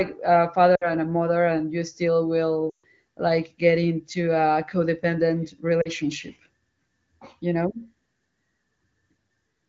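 Lost AMR speech frames break up the speech at 0.76–0.90 s, 2.69–2.85 s and 5.82–5.90 s. Frames failed their checksum, so the decoder repeated the last good pitch and vocal tract settings at falling gain. The longest gap, which fits about seven 20 ms frames, drops to near silence within two frames. The shorter ones drop out the same way. The wideband codec carries the speech between these dropouts.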